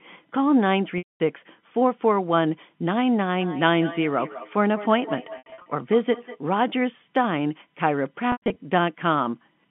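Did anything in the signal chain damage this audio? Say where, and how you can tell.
Yes. Network packet loss with pitch repetition at 0.98, 5.38 and 8.32 s: the receiver looped one pitch period, leaving frozen, fading harmonic stripes on a spectrogram.

Call processing: feedback echo between two devices, 3.41 to 6.41 s; words recur roughly every fifth of a second, about 14 dB down, as waveform ghosts.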